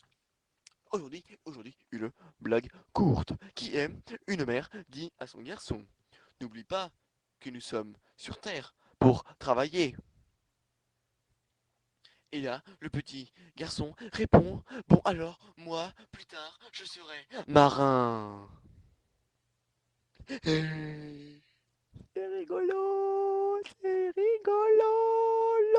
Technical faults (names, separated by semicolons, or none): none